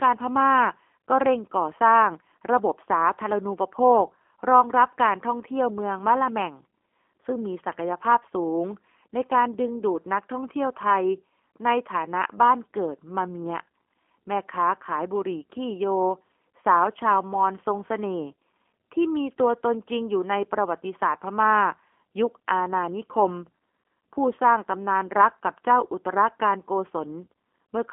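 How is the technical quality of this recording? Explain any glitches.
Technical quality is limited by one fault running through the whole recording: G.729 codec coding. The speech comes through a narrow line band of roughly 250 Hz to 3.4 kHz, with nothing at all above 3.7 kHz, which fits an 8 kbit/s G.729A VoIP path. The codec does not send the waveform itself. It sends a vocal tract filter, a pitch predictor and a few excitation pulses per frame, and the decoder rebuilds the speech from those. The damage is plainly audible as a rough, synthetic texture, with dull, muffled consonants throughout.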